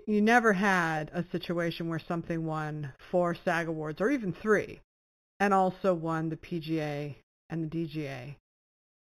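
Throughout the speech runs imaging from linear upsampling. The audio was raised from an 8 kHz rate to 44.1 kHz by joining samples with straight lines, a filter too weak to remove the spectrum's mirror copies. The top of the original band is dulled, and a faint image between 4 and 8 kHz, roughly 25 dB down, adds a thin metallic shimmer to sibilants. Unlike aliasing, the extra energy sits above the real band rather than folding down into it.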